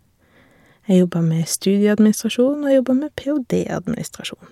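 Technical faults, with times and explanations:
No technical faults can be heard in this speech recording.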